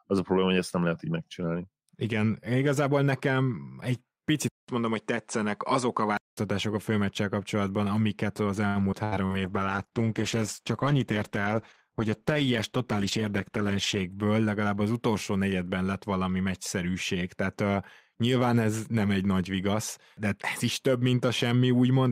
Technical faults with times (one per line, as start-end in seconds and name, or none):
4.48-6.37 input switched to a poorer device
8.67-9.42 repeated packet loss (robotic sound)
9.47-14.09 call bitrate drop
12.77-13.99 jitter buffer speed-up